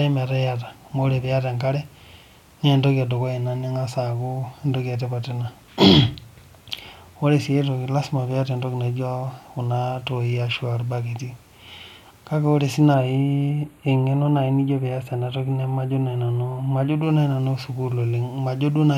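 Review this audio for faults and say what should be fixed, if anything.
Channel delay (comb filtering) runs from 12.94 to 17.03 s, right after "kake ore sii". One channel lags by a few samples. The mono sum then cancels a notch near 5 kHz, making the speech sound hollow and phasey. Fix the channel alignment before any mono fold-down.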